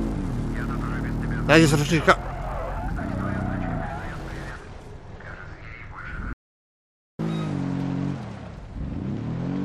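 At 6.33 s the sound cuts out abruptly. An audio dropout to silence follows, lasting about 0.86 s until 7.19 s. The gap is silent with no room tone. The input was likely lost while recording continued, writing silence.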